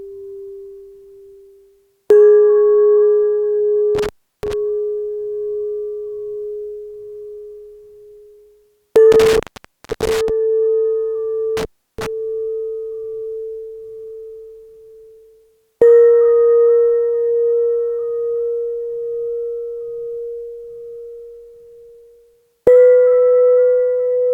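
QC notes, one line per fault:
3.95–4.53 s, 9.12–10.30 s, 11.57–12.06 s: intermittent contact. The audio drops out three times, with gaps of about 0.34 s, 0.63 s and 0.34 s, and each dropout is bracketed by crackle. A loose plug or cable connection is briefly losing contact. The crackle comes from the contact scraping as it opens and recloses. While the circuit is open, the signal is gone and faint hiss from the downstream electronics remains.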